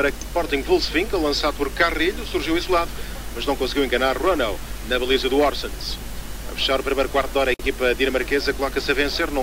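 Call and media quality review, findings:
Gap at a join of encoded pieces, 7.54–7.60 s: 54 ms dropout in continuous sound, resuming where it stopped. Separately encoded segments concatenated untrimmed, so encoder delay and end padding stay in. Waveform: flat notch, smeared edges. Spectrogram: full-band blank column.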